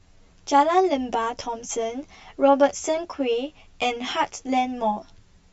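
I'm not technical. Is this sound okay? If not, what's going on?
No. From start to finish the speech sounds hollow and phasey, a bit like it's coming through a tube. This is channel delay, also called comb filtering. One side of the recording arrives roughly 10 milliseconds later than the other, and when the two are mixed into one they cancel each other at a repeating series of pitches, starting around 50 Hz and spaced evenly upward. Those missing slices of sound cause the hollowness.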